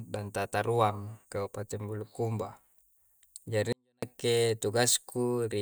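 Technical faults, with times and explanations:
3.73 to 4.03 s, 24-bit alignment error (too quiet): 24-bit samples sitting in the low bytes of 32-bit words are read as full 32-bit values, so speech drops about 48 dB, clean but nearly inaudible.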